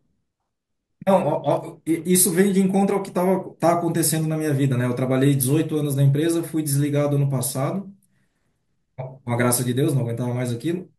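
No technical faults are audible anywhere in this recording.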